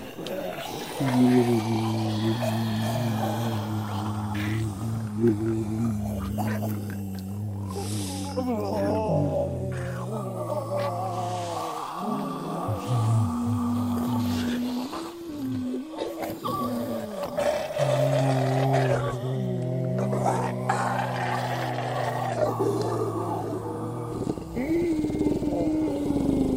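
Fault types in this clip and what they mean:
No technical faults are audible anywhere in this clip.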